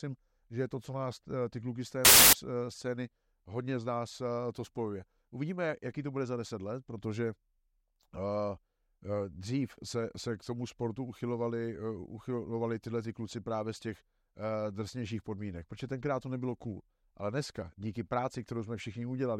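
At 2.05 s, after "ty kluky z té", samples built from the wrong bytes take over for about 0.28 s. Each sample's bytes are misassembled. The rapidly changing low bits become the dominant part. Loud, harsh broadband noise results, lasting until 2.33 s, before "scény hodně z nás".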